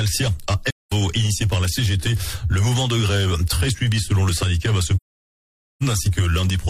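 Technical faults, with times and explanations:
0.67 to 0.92 s: AAC frame loss with muting. The audio drops to silence for about 0.21 s, consistent with around five lost AAC frames. The decoder zeroes the missing spectra, and the overlapping transform windows fade the sound out and back in across roughly one frame, giving the gap soft edges.
4.96 to 5.83 s: AAC frame loss with muting. A longer muted hole of about 0.85 s, pointing to roughly twenty consecutive lost frames, with the same faded boundaries.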